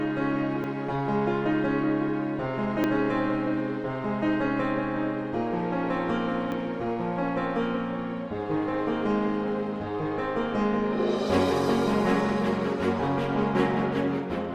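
Three short discontinuities break the audio, at 0.64 s, 2.84 s and 6.52 s. Each is an abrupt jump forward, where around 40 ms of material is missing and the two sides are butted together. The likely cause is a dropped buffer (overrun), with samples overwritten before they were read. Unlike an underrun or dropout, there is no silent gap; the sound simply skips ahead.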